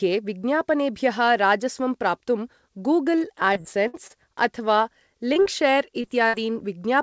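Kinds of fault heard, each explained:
Repeated packet loss (robotic sound): from 3.54 to 4.12 s, four gaps of lost or late packets follow one another closely, each patched by extending the preceding sound. About 140 ms goes missing, the longest hole near 62 ms, giving choppy, robotic speech across that stretch.
Short concealed packet loss: brief holes at 5.34, 5.42 to 5.47 and 6.01 s, roughly 20, 40 and 20 ms each, are filled by continuing the last sound and blending back, heard as quick smears or wobbles where small pieces of speech drop out.
Burst of packet loss: at 6.27 to 6.35 s about 60 ms in a row never arrives; the receiver holds the last sound and fades it, so a short buzz or hiss stands in, then speech resumes with that segment gone, over a call path band-limited to 8 kHz.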